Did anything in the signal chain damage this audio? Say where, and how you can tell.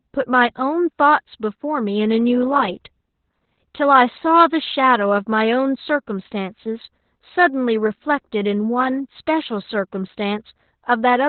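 Yes, the damage comes from the codec stage: Opus voice compression runs through the whole clip. The speech has no content above about 4.3 kHz, which points to the narrowband setting, and it sounds muffled, hoarse and slightly robotic throughout. At a rate that fits roughly 8 kbps, the SILK linear-prediction coder drops everything above 4 kHz and codes the excitation signal very coarsely. That coarse coding is what produces the rough, synthetic texture.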